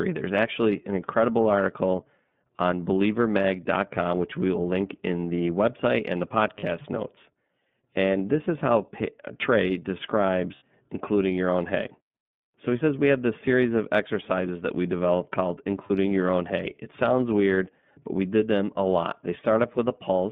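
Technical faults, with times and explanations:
Throughout, iLBC codec: the speech is squeezed into a narrow phone band, roughly 150 Hz to 3.6 kHz, with a noticeably rough, slightly synthetic edge. Each frame's excitation is coded on its own, and the texture fits the 13.33 kbps mode with 30 ms frames.
2.28–2.31 s, 6.60–6.64 s, 10.56–10.62 s and 15.87–15.91 s, lost iLBC frames: short buzzy, held-vowel patches where the decoder repeats the last pitch cycle with some noise mixed in. The one at 10.56 s runs longer, fitting two lost frames, and the speech recovers almost immediately after each.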